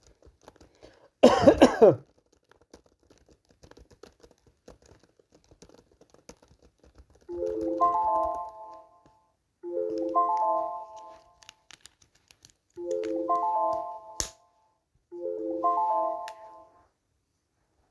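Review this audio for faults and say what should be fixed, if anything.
Nothing in this audio needs to be fixed, as there are no faults to review.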